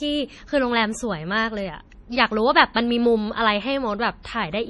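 Throughout, the speech sounds watery and swirly, with nothing above 11.4 kHz and heavy damage that fits a low bitrate near 32 kbps, likely from MP3 compression. From 2.74 to 2.76 s and again from 4.23 to 4.25 s, a brief hiss comes just before a sharp attack, which sounds smeared. This is pre-echo: the codec spreads noise meant for the loud attack back into the quiet moment before it.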